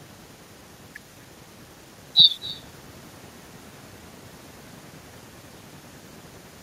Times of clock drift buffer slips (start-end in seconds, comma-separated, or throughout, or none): none